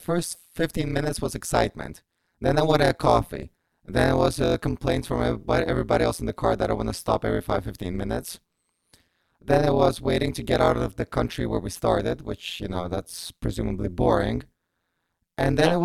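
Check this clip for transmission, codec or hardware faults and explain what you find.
One fault runs through the whole speech clip: overlap-add ripple. Windowed frames were rejoined with an overlap that doesn't sum to constant gain. So the level dips by about 60 dB, around 150 times a second. It sounds like a harsh, robotic, metallic buzz with extra tones around the voice.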